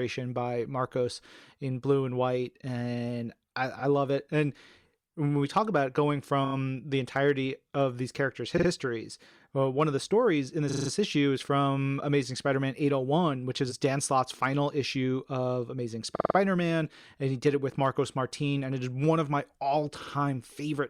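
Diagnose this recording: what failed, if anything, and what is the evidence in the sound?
Repeated frames occur at 3.79–3.82 s, 6.44–6.54 s, 8.57–8.67 s, 10.69–10.90 s, 16.15–16.36 s and 20.01–20.13 s, the last just after "of my". Each is a stutter. The looped blocks run 20 to 60 ms and play again one to five extra times, adding 20 to 200 ms each. That points to the codec, storage or network stage writing or delivering the same compressed frames more than once.

Hard clipping flattens peaks at 5.57–5.80 s, 7.16–7.30 s, 7.81–7.83 s, 9.80–9.83 s, 13.86–14.46 s (between "which is" and "issue of"), 17.47–17.49 s (after "and he", before "it with") and 17.85–17.88 s. The overload is about 1 to 4 dB, heaviest at 5.6 s. Peaks exceeded what a converter or sample-format stage could carry and were cut flat, adding high harmonics heard as crackle on loud syllables.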